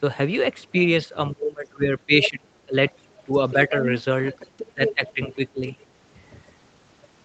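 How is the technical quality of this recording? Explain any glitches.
The recording has repeated echo-control trouble: the talker is pushed down whenever two voices overlap, and a second voice leaks through as well. The speech tops out at about 8 kHz, consistent with an Opus call path at 32 kbps.

Speech suppressed in double talk occurs from 1.32 to 2.92 s, 3.25 to 3.74 s and 4.73 to 5.63 s. The likely cause is an echo canceller that could not tell the near talker from loudspeaker echo while both sides spoke, so it attenuated everything. The talker dips by roughly 20 dB in the first stretch, about a second in total, by about 10 dB over roughly 150 ms in the second, and by about 15 dB over about half a second in the third.

The other side's voice leaking through appears at 2.23 to 2.30 s, 2.93 to 3.13 s, 3.51 to 5.30 s and 5.72 to 5.84 s. Far-end audio played on the loudspeaker was likely not fully removed from the microphone signal. 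The brief scraps at 2.23 s and the longer stretch from 3.51 s sit only about 10 dB below the talker. The pieces at 2.93 s and 5.72 s are much fainter, around 30 to 35 dB down.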